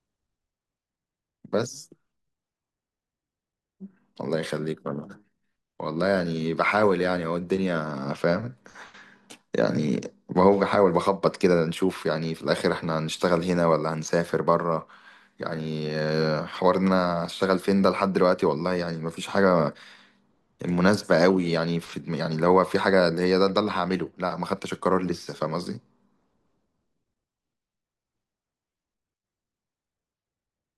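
No technical faults can be heard anywhere in the recording.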